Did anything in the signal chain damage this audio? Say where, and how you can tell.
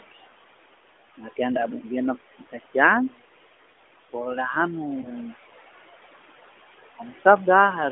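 Yes. Call processing: noise suppressor artifacts run throughout, pulling background down about 17 dB so it pumps between phrases, unlike steady room noise.

Call processing again: speech cut by the noise suppressor at 2.29–2.54 s, dipping about 9 dB for roughly a tenth of a second. The sound turns faint rather than vanishing, so it is not a dropout.

Network into codec: lost AMR speech frames at 5.02–5.12 s, with one 20 ms frame concealed. It gives a brief dip from reused pitch and vocal tract settings with falling gain rather than a clean level drop.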